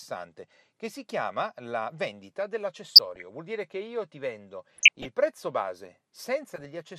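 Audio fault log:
throughout: MP2 compression. The audio was likely coded as MPEG Layer II at a low rate, with a dull, gurgling sound that fits about 80 kbps. With so few bits, the encoder starves the upper sub-bands, switching them off or letting them flicker between frames, and coarsely quantises the bands that remain. The speech loses its top end, and a granular, watery distortion sits on it for the whole clip.
2.89–3.24 s, 4.76–5.06 s, 6.54–6.65 s: DAB burbling. Bit errors at roughly half a percent, a little lower in the last burst, got past the error correction and corrupted the MP2 data. Damaged samples put short blips of noise into single sub-bands, and damaged scale factors make sub-bands jump in level for up to a frame. The first two bursts sound like runs of a dozen or more hit frames. Each burst puts burbling over the speech, and the last one is shorter.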